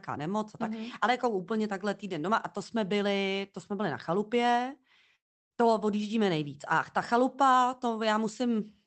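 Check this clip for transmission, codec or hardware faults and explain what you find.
There's one clear fault in this speech clip, a long network dropout from about 5.15 to 5.53 s, right after "jsme byli na chalupě". At that point the signal breaks. The tail of the last sound gets stretched into a fading buzz, then it drops to near-silence until "to odjíždíme nejvíc" comes back in. The likely cause is packets failing to arrive, so the receiver papered over the gap by extending what it had, then gave up. About 0.36 s of the original never gets played. The call-codec path, which sounds top-limited around 8 kHz, runs underneath all of this.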